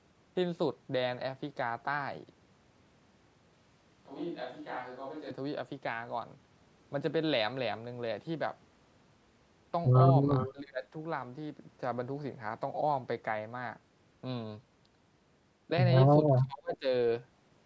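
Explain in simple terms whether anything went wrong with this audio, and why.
Several things went wrong in this speech recording.

From 3.53 to 5.31 s, there is a switch to a distant microphone. The voice suddenly sounds roomy and hollow, as if spoken from across the room. It loses some of its warmth and gets a bit quieter. The background noise of the room also becomes easier to hear. This likely happened because the close microphone dropped out and a farther one took over. At 5.31 s the close sound snaps back.

From 10.36 to 10.52 s, there is an echo leak. A short, faint copy of the voice comes back about 0.4 seconds late. This is likely because the other side was using a loudspeaker. Their echo canceller did not fully remove the sound its microphone picked up, so some of it was sent back.

Right after that, from 10.52 to 10.86 s, and again from 16.40 to 16.88 s, there is speech suppressed in double talk. 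The voice suddenly dips and fades, sounding choked or partly cut off. The drop is strong, and deeper the second time. This likely happened because both people spoke at once. The call software could not tell the talker from the echo, so it turned both down.

The call's normal microphone processing can also be heard. It leaves nothing above 8 kHz, which is expected on a call and is not a fault.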